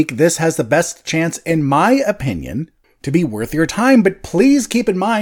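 Nothing technically wrong can be heard anywhere in this speech recording, with no faults of any kind audible in the signal.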